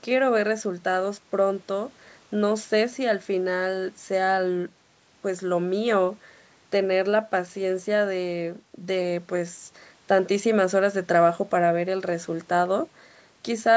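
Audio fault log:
No faults logged; the speech carries the normal marks of call microphone processing, with the lowest bass trimmed by its high-pass filter and nothing present above 8 kHz.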